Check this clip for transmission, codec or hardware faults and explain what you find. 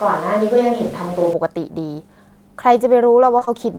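Two faults turn up, one at the very start and one at the very end.

From the opening until 1.33 s, the recording is on a switch to a distant microphone, likely because the close microphone's feed dropped out and a farther pickup was used. The speech sounds roomy and hollow, with thinner bass, though the level barely drops. Room noise sits roughly 25 dB below the speech, more exposed than a close microphone would leave it. At 1.33 s the sound snaps back to the close pickup.

From 3.39 s to the end at 3.79 s, there is repeated packet loss, giving a robotic sound. Audio packets went missing several times in quick succession, and the decoder covered each hole by extending the last sound it had, filling 69 ms in total. The longest gap is 23 ms, and about 16% of the stretch is patched rather than real. The result is choppy speech with small pieces missing.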